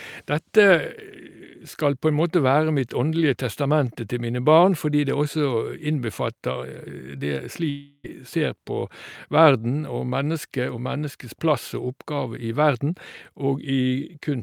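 At 7.69 s the speech gives way to a smeared buzz that carries on the last sound and fades over about 0.34 s, followed by roughly 20 ms of silence before speech resumes at 8.06 s. This points to a likely long network dropout: the receiver concealed the gap, and about 0.34 s of speech was never played. Unlike a brief concealed packet loss or a plain mute, the fading tail is followed by a jump forward in the speech.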